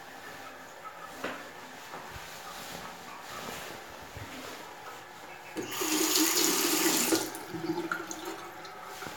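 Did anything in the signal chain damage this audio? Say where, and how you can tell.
No, nothing in the chain audibly damaged this audio, and no stage from capture through playback leaves a mark on the sound.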